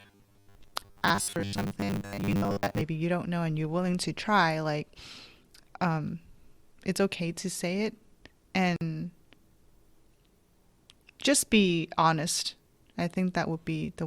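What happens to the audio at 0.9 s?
At 0.9 s the speech is inside a stretch of robotic sound from repeated short buffers that runs from 0.01 to 2.81 s. The voice becomes a rigid, metallic buzz fixed at 100 Hz that loosely follows the syllables. The likely cause is audio arriving too seldom, so playback loops the last 10 ms over and over, which fits that 100 Hz pitch, while most of the real signal is skipped. Unlike steady mains hum, this buzz rises and falls with the speech and disappears after 2.81 s.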